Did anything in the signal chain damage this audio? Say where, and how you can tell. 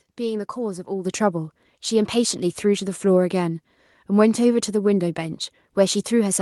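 Yes: a microphone volume stepped up fault at 1.05 s, in the call processing stage. At that instant the speech and the room tone behind it jump together by about 7 dB and stay at the new level, with no fade or ramp. That shared, abrupt rise points to the call software judging the microphone input too quiet and raising the device's input volume in a single step, rather than anything in the talker's delivery changing.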